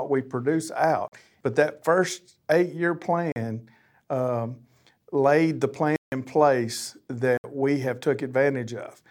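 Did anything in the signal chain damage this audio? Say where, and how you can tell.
Yes: the speech has four blocks of digital silence, a driver or buffer fault: 40 ms at 1.08 s, 40 ms at 3.32 s after "that first eight year", 160 ms at 5.96 s after "um laid the", and about 67 ms at 7.37 s before "we have". Each is an abrupt cut to silence. An unfilled output buffer does this, whereas packet-loss concealment fills gaps and a noise gate fades in and out.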